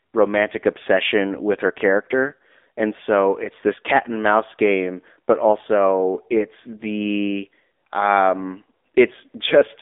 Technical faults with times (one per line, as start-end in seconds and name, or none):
0.00-9.82 AMR narrowband mobile codec